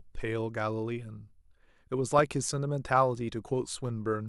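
A corrupt frame decoded at 3.45 s shows up as a brief, faint blip in the speech. The damage looks confined to a couple of compressed frames whose bits were flipped in transit or storage, yet the decoder played them rather than concealing them. Misread gains and codes there put energy at frequencies where none belonged, giving a short, synthetic squeak-like tick. It is quiet, peaking at about -40 dBFS.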